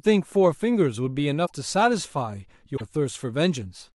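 At 1.45 to 1.52 s and again at 2.76 to 2.81 s the speech skips ahead with a brief glitch, roughly two to three 26.1 ms frames long. This is likely a broken MP3 bit reservoir, where later frames decoded borrowed data from the wrong frame, unlike a plain dropout's clean silence.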